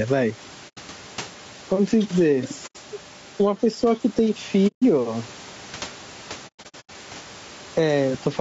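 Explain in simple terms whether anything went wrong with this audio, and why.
A few things went wrong here.

First, gain pumping. The level keeps breathing, getting shoved down whenever the speech gets loud. That's likely a mic gain set way too high with a fast limiter clamping down on every loud bit, so everything sounds squashed.

Second, low-delay AAC compression. The whole clip has that rough, grainy video-call sound, with a fizzy haze between the tones of the speech and a top end that sounds a bit fake. This likely comes from the codec, which chops audio into very short chunks to keep delay down, and that costs quality.

Third, AAC frame loss with muting. Chunks of audio went missing, and the decoder filled them with silence, fading out and back in, so you hear soft holes. They come at 0.68 to 0.79 s and 2.66 to 2.76 s, each about 90 ms, and at 4.67 to 4.83 s, about 150 ms. Then from 6.47 to 6.91 s there's a cluster of dropouts, the longest about a tenth of a second.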